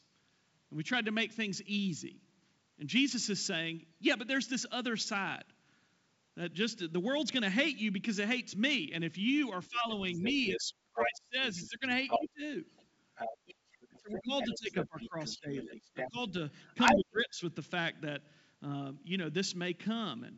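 From 9.69 to 12.44 s the talker's speech repeatedly dips, by roughly 25 dB at worst, likely speech suppressed in double talk as the echo canceller ducked both voices. From 10.16 to 11.07 s and again from 11.61 to 17.0 s a second voice comes through at about the same level as the speech, likely the other side's voice leaking through from a loudspeaker the canceller did not clean. Between 13.89 and 17.4 s the talker is again pushed down, by roughly 20 dB, in the same double-talk suppression, with the G.722 band limit near 7.7 kHz heard throughout.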